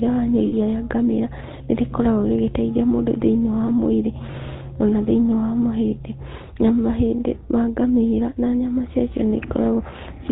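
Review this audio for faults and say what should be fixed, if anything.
The GSM full-rate codec runs through the whole speech clip, with plainly audible damage. The codec rebuilds the voice from a vocal-tract model driven by a sparse, regularly spaced pulse excitation, so the sound has a buzzy, gravelly roughness and nothing above 4 kHz. That fits the 13 kbps full-rate mode. Unlike simple low-pass band-limiting, the roughness is in the voicing itself, not just a loss of treble. Prevention: carry the audio over a wideband codec such as AMR-WB or Opus instead of GSM full rate.

Lost GSM frames appear twice. The first runs from 0.46 to 0.53 s, just before "rĩa ngamĩra", and fits about three lost 20 ms frames. The second runs from 4.32 to 4.35 s, between "mũndũ thĩiniĩ wa mwĩrĩ" and "ona thĩiniĩ", and fits a single frame. At each gap the decoder repeats the last good frame's settings, so the sound is held as a brief rough, metallic ring. 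A dropout in plain PCM would instead give a click or hard silence. Prevention: improve the radio link or add error protection and jitter buffering so fewer frames arrive corrupted.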